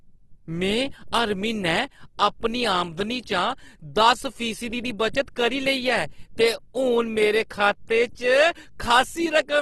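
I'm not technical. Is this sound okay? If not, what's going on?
No. The speech was most likely squeezed hard by Opus compression, which keeps the overall level in each pitch range but fills in missing detail with copies or noise. Throughout, the voice sounds grainy and rough, with nothing above 12.2 kHz.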